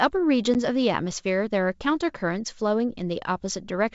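At 0.54 to 0.56 s the speech shows packet loss on an ADPCM call: about one packet, 10 ms of audio, drops to silence, leaving a hard-edged gap in the waveform and a blank vertical strip on the spectrogram. The decoder's predictor then restarts out of step, so the sound resumes slightly distorted before settling. Outside the gap the clear wideband band up to 7 kHz fits G.722 at 64 kbit/s.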